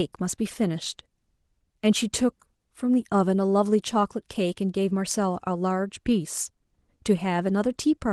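No technical faults can be heard anywhere in this recording.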